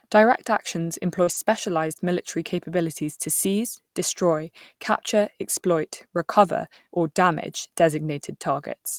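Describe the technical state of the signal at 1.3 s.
Around 1.3 s the sound turns rough and noisy for roughly a tenth of a second, from 1.27 to 1.37 s. This is a lost packet rebuilt from error correction. About 60 ms of audio came from low-bitrate copies carried in the following packets, which fits three lost packets, so nothing drops out but the quality coarsens.

Just before and overlapping this, from 1.23 to 1.29 s, there is a brief smeared wobble. This is short concealed packet loss. About 40 ms never arrived in time, and the receiver bridged 34 ms of it by extending the preceding sound before blending back into the real signal.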